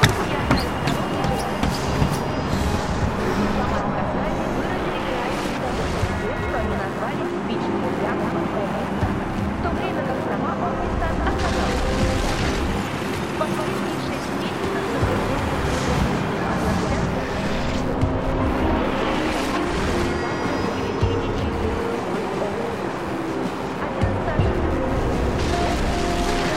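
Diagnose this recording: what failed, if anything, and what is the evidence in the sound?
The failure is in the analogue wiring: computer activity noise runs right through the recording. There's a buzzy, chirpy pulsing at about 100 Hz, sitting maybe 25 dB under the sound, and it rises and falls with what the machine is doing, not with the material itself. That's the processor, graphics card or mouse pulling current through a ground the audio circuit shares, so every load swing shoves the audio's reference around.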